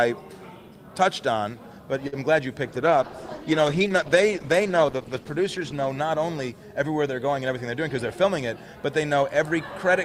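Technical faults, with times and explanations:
2.07–2.14 s, short stall from a late packet: a packet showed up late, so the last sound got held about 50 ms until it arrived, nothing lost.
2.7–5.94 s, call bitrate drop: the encoder fell from 48 to 12 kbps, so the sound goes coarse, watery and muffled, highs gone, until it recovers.
7.48–8.01 s, jitter buffer speed-up: a backed-up buffer got trimmed by roughly 50 ms of pitch periods, so the audio runs about 8% fast, same pitch, hurried.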